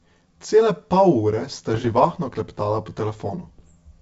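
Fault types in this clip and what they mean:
Channel delay (comb filtering): One channel arrives roughly 10 ms behind the other before the two are summed to mono. Whatever the channels share cancels at evenly spaced frequencies, starting near 40 Hz and repeating about every 100 Hz up the spectrum. Throughout the speech this leaves a fixed set of notches that gives a hollow, phasey colouring, as if the sound were passing through a tube.
Bit errors on an ADPCM link: Bits were corrupted on the wideband ADPCM path carrying the speech, which fits a G.722 call. Each error also knocks the decoder's step size and predictor off track, so the damage rings on for some milliseconds rather than staying a single click. It shows as two patches of pops, rough crackly bursts and brief jumps in level, from 1.74 to 2.13 s and again from 3.59 to 3.75 s.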